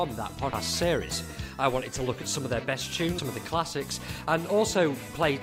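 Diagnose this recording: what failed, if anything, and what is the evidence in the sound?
Codec stage: compressed frames skipped at 0.53 s and 3.18 s. Each time the audio jumps ahead by roughly 150 ms, which fits about four 32 ms frames lost or rejected by the decoder.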